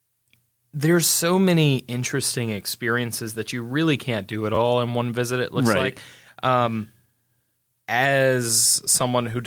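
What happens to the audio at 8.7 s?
A repeated buffer from 8.67 to 8.71 s: a roughly 12 ms slice, fitting a 512-sample buffer, replays three extra times, giving a brief buzz rather than a silent dropout gap.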